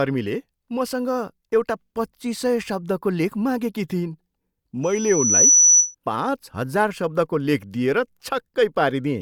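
From 4.83 to 5.95 s a piercing 5.9 kHz whistle swells within about 0.7 s well above the speech: loudspeaker feedback squeal, the microphone re-amplifying its own loudspeaker.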